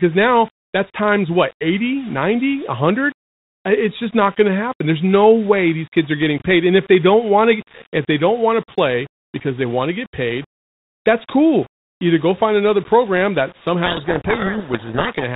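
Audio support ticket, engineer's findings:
Low bit depth without dither, throughout: gritty, level-following grain on quiet passages, noise roughly 25 dB under the signal. Waveform shows stair-stepped samples. Likely undithered rounding to about 6 bits.

Codec payload misread, 13.86–15.25 s, after "find another program that": speech buried in harsh distortion. Spectrogram turns into broadband smear under 4 kHz. Points to bit-order mismatch in G.726 code words.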